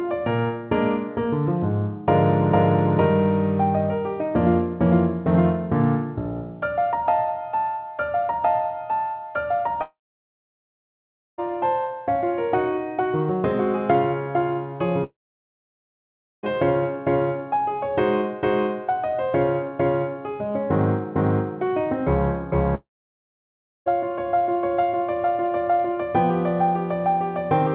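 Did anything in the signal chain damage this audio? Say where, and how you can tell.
Yes. At 9.82 to 11.40 s, 15.04 to 16.45 s and 22.75 to 23.88 s the sound breaks off into a brief fading buzz, then roughly a second or more of silence before it resumes further on. About 1.56 s, 1.40 s and 1.12 s of material never returns. This is likely a long network dropout at the network stage, where the receiver's concealment stretched the last sound and then gave up. The G.711 A-law call path, which stops at 4 kHz, carries the audio either side.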